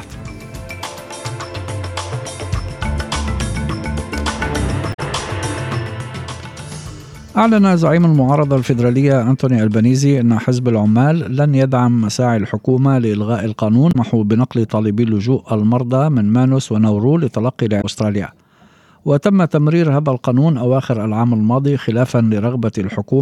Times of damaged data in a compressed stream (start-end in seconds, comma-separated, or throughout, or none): 4.90-5.00, 13.89-13.95, 17.78-17.85